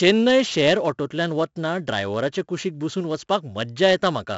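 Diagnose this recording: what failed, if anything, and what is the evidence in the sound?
The speech carries a gritty, level-following hiss from start to finish that swells on every loud syllable, with roughened, distorted attacks, and the audio is dull with nothing above about 7.7 kHz. This is a codec fault: 4-bit ADPCM compression, applied heavily. Each sample is coded as a coarse 4-bit step from a prediction, so the error rides on the signal, and the step size lags sharp onsets. The cutoff and grain point to a 64 kbps stream at a low sample rate.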